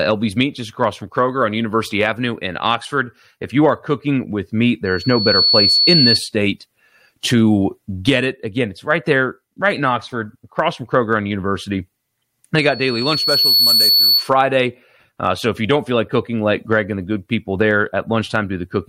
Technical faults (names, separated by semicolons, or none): loudspeaker feedback squeal